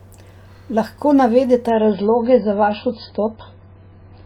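From 1.70 s the speech abruptly turns dull and watery, nothing above 5 kHz: an adaptive stream at a lower bitrate, which fits MP3 dropping to 16 kbit/s.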